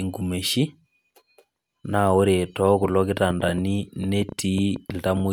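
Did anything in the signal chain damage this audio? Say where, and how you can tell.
Yes. From 2.84 s to 5.21 s a train of clicks rides over the speech, most likely from electrical interference coupling into the analogue wiring or from a faulty connection or power supply injecting pulses. About fifteen near-identical ticks arrive at roughly 6.4 per second, spaced irregularly, and they carry on through the pauses, which shows they come from the chain rather than the talker. Their peaks reach about 5 dB above the speech.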